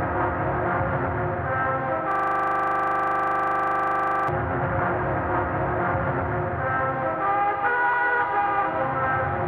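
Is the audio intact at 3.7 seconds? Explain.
No. From 2.12 to 4.28 s a system hang loop occurs: the system froze while the sound hardware kept replaying the same 40 ms buffer. That one fragment repeats exactly, around 54 times, producing a rigid, buzzing stutter at 25 Hz.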